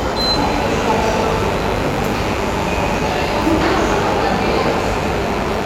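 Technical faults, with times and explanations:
0.34 s to the end: mains buzz, a steady raspy drone riding about 10 dB under the sound. Something like a dimmer or poor shielding is letting sharp spikes in on each half of the 50 Hz cycle, so harmonics stack well into the kilohertz range.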